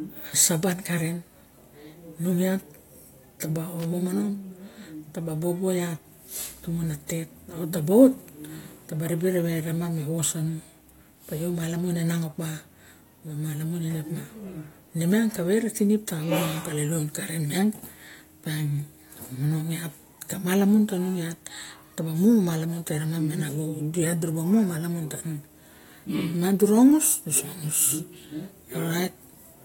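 A worn or dirty contact in the signal path briefly made and broke connection from 3.80 to 3.85 s. This loose connector crackle chops the speech signal into an irregular burst of scratchy crackle lasting about 50 milliseconds.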